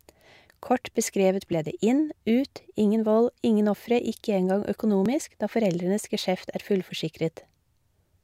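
At 1.53 s, just before "ble det inn", and again at 5.06 s, the speech jumps ahead by a few milliseconds, likely a dropped buffer (overrun). Each shows as a waveform discontinuity with no gap, and a thin vertical broadband line on a spectrogram.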